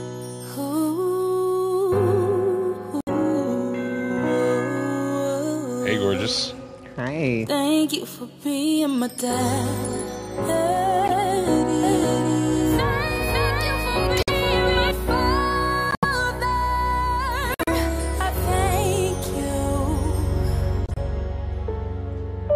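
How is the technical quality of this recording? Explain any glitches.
The recording has two kinds of technical fault: repeated decoding glitches and a stretch where the sound is doubled.

Corrupt frame decoded: short chirps and noise bursts, each under a sixth of a second, occur at 3.00, 11.05, 14.17, 15.91, 17.54, 19.24 and 20.86 s. They come from damaged compressed frames that were played anyway, placing energy at the wrong frequencies. The bursts at 14.17 and 15.91 s are the loudest, peaking around -5 dBFS.

Doubled audio track: from 11.83 to 14.91 s, a second full-band copy about as loud as the original trails it by roughly half a second. It starts and stops abruptly, with no decay or room colour, most likely because the signal was captured twice through a slower path.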